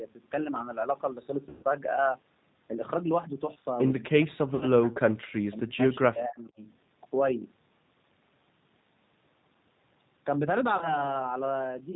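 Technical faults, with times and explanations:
Throughout, G.729 codec: Everything here went through the 8 kbit/s G.729A codec, and the damage is plainly audible. The decoder rebuilds each 10 ms frame from a vocal-tract filter, a pitch predictor and a handful of pulses, so the speech has a rough, slightly synthetic edge. Nothing above 4 kHz gets through, which makes it sound boxy.
1.49–1.64 s, 4.55–4.65 s and 10.77–11.03 s, VoIP packet loss concealed by the speech codec: Chunks of audio went missing, about 140 ms in the first gap, 60 ms in the second and 40 ms in the third. In each gap the decoder keeps stretching the last pitch and filter shape while turning the level down, so you hear a brief buzzy, smeared tone instead of real speech. Because each frame leans on the one before, things stay a bit weak and distorted just after the audio comes back.
4.05–6.59 s, speech suppressed in double talk: Across this stretch the speech dips sharply, to roughly 40 dB down at its deepest, and is turned down for about two seconds in total. 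The likely cause is the echo canceller getting confused while both ends were talking. It can't tell the near talker from the loudspeaker echo, so it turns down everything, and the talker's own speech gets clamped along with the echo.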